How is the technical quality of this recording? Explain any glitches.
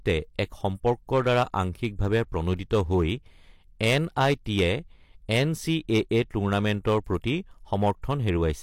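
The recording has one fault: hard clipping, present throughout the speech. The signal was driven about 8 dB beyond what one stage could pass. That stage could not hold the excess, so it cut the tops of the waveform flat. Only around one percent of the samples went over the limit. The flattened peaks add harmonics high in the spectrum. They are heard as distortion on the loudest moments of the speech.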